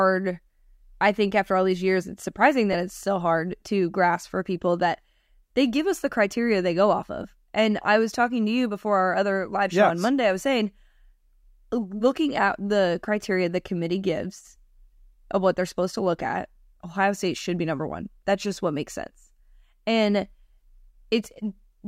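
At 2.73 to 2.75 s, between "these years it's surprising" and "it's still hard to", and again at 7.23 s after "criteria they go off", lost LE Audio frames leave about 15 ms gaps. This points to a couple of dropped frames each time. The LC3 decoder patched each gap with the previous spectrum under random signs, producing a brief noisy smear. On a spectrogram this shows as a short vertical band where the harmonic lines dissolve into diffuse energy.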